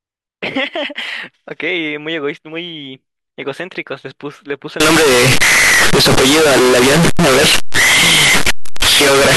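From 4.80 s to the end of the clip at 9.37 s, samples written as 32-bit float were likely read back as 32-bit integer, a float read as integer fault. The sign and exponent bits now dominate each value, so the waveform collapses into a near-square shape at an almost fixed, high level regardless of the original level. The speech turns abruptly loud and harsh, with background noise rising to match it, though pitch movement remains traceable.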